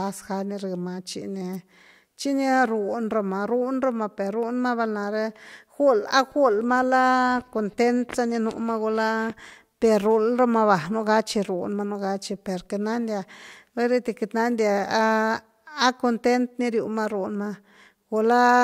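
An electrical switching spike at 1.53 to 1.56 s: a sharp snap of about -25 dBFS over the speech, likely a nearby switch arcing into the audio line.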